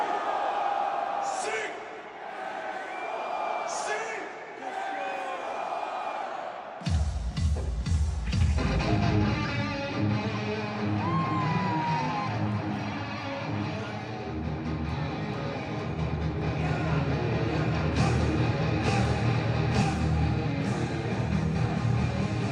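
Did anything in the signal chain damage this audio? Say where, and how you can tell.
Yes. A doubled audio track appears from 16.42 to 19.82 s, likely from a second, slower capture path or an edit leaving two copies out of step. A full-band copy trails by about a second, roughly 5 dB quieter, with no decay or room colour, and it starts and stops abruptly.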